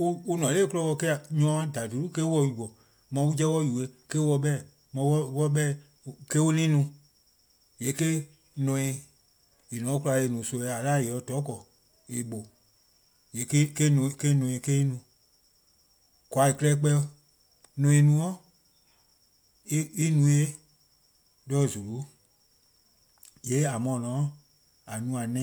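No technical faults can be heard anywhere in the speech.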